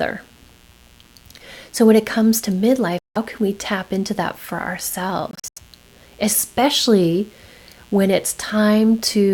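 A steady, raspy buzz sits under the speech throughout, about 35 dB below it. This is mains buzz: switching spikes at twice the 60 Hz mains rate spread harmonics into the kilohertz range.

From 2.99 to 3.17 s, between "when it comes to" and "can we tap into", the sound cuts out and returns as though it had played on. The same happens from 5.31 to 5.59 s, where about 0.17 s goes missing in several short holes, the longest about 85 ms. This is likely a Bluetooth dropout, with late packets discarded before reaching the headphones.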